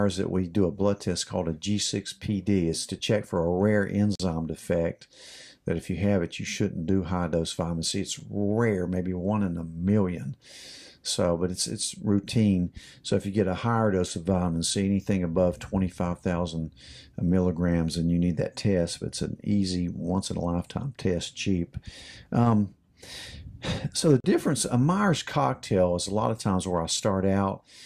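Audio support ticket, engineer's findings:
Gap between stream segments: hard-edged silent holes at 4.15–4.20 s (43 ms), 8.20 s (7 ms), 24.20–24.24 s (39 ms). They fall on 4 s segment boundaries, where timestamp misalignment makes the player pad with silence. Nothing is dropped, and the timeline shifts later. Waveform shows flat near-silent runs; spectrogram shows full-band vertical blank stripes.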